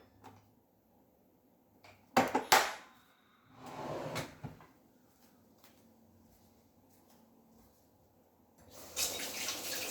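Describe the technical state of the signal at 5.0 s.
At 5.0 s the sound is intact, with no dropout, distortion, glitch or other fault.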